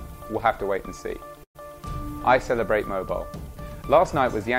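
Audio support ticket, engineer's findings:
Burst of packet loss, 1.43 to 1.57 s. Consecutive packets dropped or arrived too late in the network/jitter-buffer path; concealment extended the last sound for about 112 ms, fading it down, with roughly 90 ms reaching silence. Playback then resumes about 120 ms further along, so that stretch of audio is skipped.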